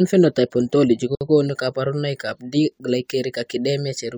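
At 1.15 s the speech drops out for about 58 ms, ending at 1.21 s: a gap at a join of encoded pieces. The audio appears to have been encoded in separate sections and butted together without trimming, so the encoder's start-up delay and the padding on the previous section's final frame both remain as silence. The edges of the gap are smeared by the codec, and the speech resumes exactly where it stopped.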